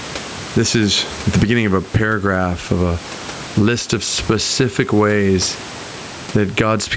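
Throughout the speech, gain pumping squashes the sound, pulling loud and soft parts closer in level, a swing of about 15 dB. The likely cause is gain set far too high and pulled down by a fast limiter. On a waveform, the envelope looks flattened, with the noise floor rising between phrases.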